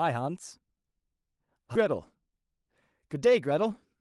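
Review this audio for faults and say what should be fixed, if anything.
At 1.75 to 1.77 s the speech jumps forward with no gap, and the syllables on either side are joined almost directly. This skip ahead means around 0.7 s of speech is simply missing. While later audio was already queued, a stretch was dropped, either lost in transit or discarded when the jitter buffer overflowed. Nothing was filled in, so the cut lands as an abrupt splice and the delay shrinks by roughly the same amount. To prevent it, size the jitter buffer to absorb bursts and use loss concealment or retransmission rather than discarding queued audio.

From 1.85 s to 3.95 s the speech sounds slightly hurried, running about 5% fast while the pitch stays the same. This is a jitter buffer speed-up. After the buffer had built up more audio than its target, the receiver cut out short pitch-period pieces over and over to bring the delay down, removing about a tenth of a second in total. 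The Opus call path carrying the audio contributes its ordinary coding noise and cuts off content above about 12 kHz. To prevent it, smooth packet delivery upstream so the buffer does not overfill and need draining.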